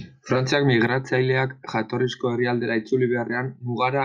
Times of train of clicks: none

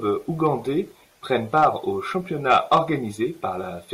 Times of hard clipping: 0.46, 1.36-1.67, 2.50-2.78

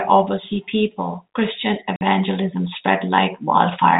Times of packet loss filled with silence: 1.96-2.01

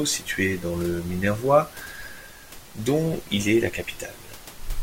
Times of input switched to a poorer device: none

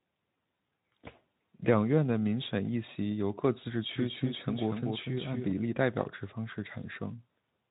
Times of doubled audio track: 3.95-5.51

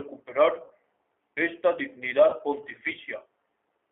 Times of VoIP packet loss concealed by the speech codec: 0.64-0.72, 2.30-2.37

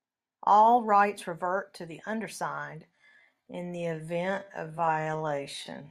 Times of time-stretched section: 2.91-5.90

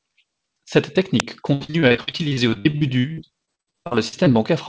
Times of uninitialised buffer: 1.20

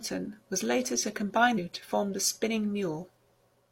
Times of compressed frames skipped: 1.54-1.59

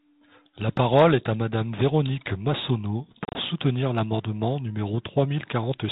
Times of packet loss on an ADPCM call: 3.25-3.36

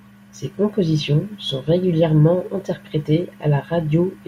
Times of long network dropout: none

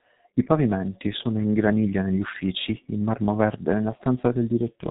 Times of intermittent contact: none

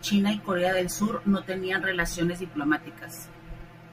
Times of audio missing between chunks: none

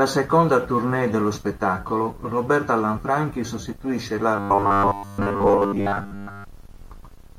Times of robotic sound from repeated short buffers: 4.36-6.44

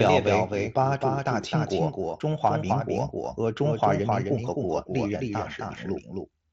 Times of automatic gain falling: none

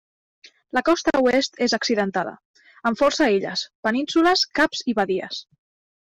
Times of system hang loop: none

